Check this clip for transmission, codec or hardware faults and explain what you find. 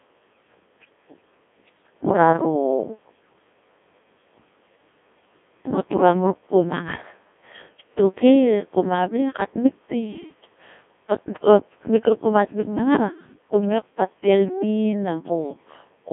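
The speech has one fault, present from start to finish: a Codec 2 vocoder. The decoder rebuilds the speech from sine waves using only pitch, voicing, energy and a spectral envelope, which fits a rate near 1.6 kbit/s. The result is heavily robotic and buzzy. A spectrogram shows even harmonic stripes across roughly 200 Hz to 3.5 kHz, nothing above 3.8 kHz, and a waveform whose shape no longer follows the original.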